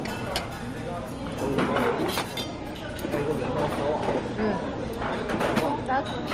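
From start to finish, a steady buzz at about 43.1 Hz sits under the sound and rises and falls with its level. This is a filter restarted on every block: the filter loses its state and each block opens with a small transient, which fits a 1024-sample block size.

Also throughout, the audio has nothing above 15.9 kHz, and two distinct kinds of coding artefact are heard together. The likely cause is transcoding between lossy codecs, with an MP3 stage followed by Opus, each adding damage while the lowest cut-off persists.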